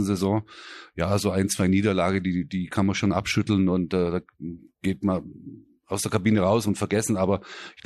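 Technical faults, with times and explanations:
No technical faults detected.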